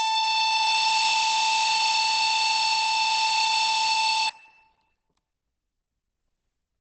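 Throughout, the music sounds muffled and hoarse, cut off above 9.6 kHz rather than swirling like MP3: likely Opus compression in speech mode, fitting roughly 16 kbps.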